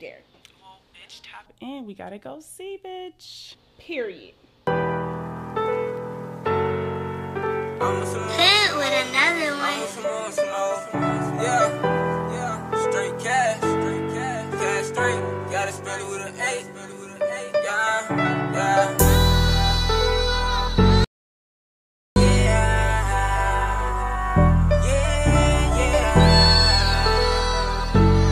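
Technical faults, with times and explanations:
21.04 to 22.16 s, audio dropout to silence. The sound cuts off abruptly and returns just as suddenly about 1.12 s later. The gap is silent, with no room tone or background noise underneath it. Whatever occurred in that stretch is missing entirely. The cause is likely a lost input, such as a disconnected device, a failed link or an accidental mute, while the recording carried on writing zeros.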